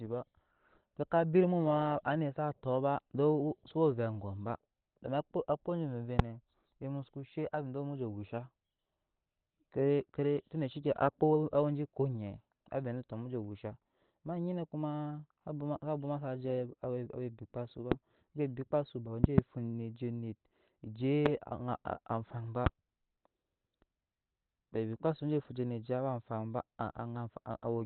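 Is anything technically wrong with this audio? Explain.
Yes. The speech is likely damaged by Opus compression, and loud pops occur four times.

Opus compression, throughout: the speech sounds muffled and hoarse, with the top end cut off at a narrowband limit. This points to the encoder running in its SILK speech mode at a low rate, around 16 kbps, where bandwidth is sacrificed to fit the bits.

Loud pops, at 6.19–6.22 s, 19.24–19.41 s (a double pop), 21.26–21.28 s and 22.66–22.69 s: sharp clicks sit on top of the speech, which continues underneath. They peak about 25 dB above the signal at the first two and about 20 dB at the last two. Their likely cause is a sudden voltage step or pulse from a plug, switch, static discharge or driver glitch, shaped by the downstream circuitry.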